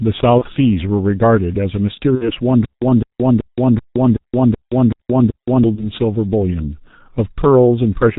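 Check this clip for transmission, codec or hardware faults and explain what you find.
Three kinds of fault are present: heavy low-bitrate codec damage throughout, short concealed packet losses at three points, and a stretch of repeating stutter with silent gaps.

Across the whole clip, the G.723.1 codec at 6.3 kbit/s heavily degrades the speech. Its 30 ms frames and slowly updated voice model leave it muffled and hoarse, with smeared consonants. A spectrogram shows nothing above 4 kHz and coarse, blocky formant tracks.

VoIP packet loss concealed by the speech codec occurs at 0.39–0.44 s, 2.15–2.30 s and 5.75–5.91 s. The first and last fit one lost 30 ms frame, the middle one about 60 ms. The decoder extends the last pitch and filter with falling gain, so the sound is stretched into a buzzy tone or coloured noise that fades. On a spectrogram this shows as flat, stretched content, and the waveform envelope decays, staying weak briefly after each gap.

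From 2.65 to 5.64 s there is a stutter with silent gaps, likely from a stalled player or stream retrying. A 208 ms fragment replays every 0.38 s with 172 ms of digital silence between, and the intended audio is lost. The waveform shows identical blocks separated by flat silent stretches. A spectrogram shows repeating copies with blank columns between them.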